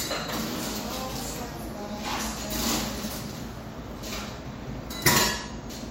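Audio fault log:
No audible faults found.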